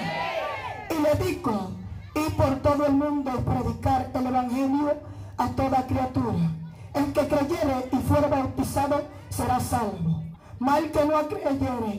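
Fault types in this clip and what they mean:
Broken MP3 bit reservoir: The sound jumps ahead with a brief glitch at 8.61 s, and again from 10.33 to 10.36 s. The likely cause is lost MP3 frames of about 26 ms each. The next frame then reads its borrowed data from the wrong place.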